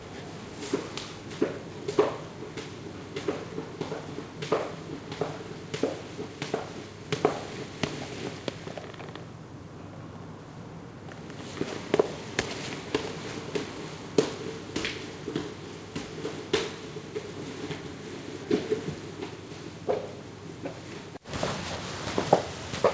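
Sounds carried over a WebRTC call path, band-limited to 8 kHz as expected of a G.722 wideband link, with nothing technically wrong to report.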